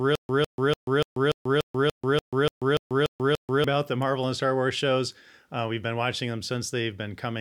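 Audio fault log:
0.00–3.64 s, stutter with silent gaps: already under way when the clip opens, the same speech fragment of about 154 ms repeats 12 times, each followed by roughly 137 ms of digital silence, giving a steady cycle near 291 ms. The pattern likely comes from a player or stream stalling and replaying its last buffered fragment on each retry before running dry. The audio that belonged in that span is missing.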